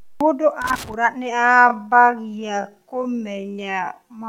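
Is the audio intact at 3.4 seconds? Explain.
No. At 3.4 seconds the speech sits inside a time-stretched section that runs from 1.29 s to the end of the clip. The pace drops abruptly to about 0.54 times normal speed, yet the pitch stays the same. The slowed sound drags. This is likely software stretching the audio to fill a set length, keeping pitch steady by repeating short pieces of the sound.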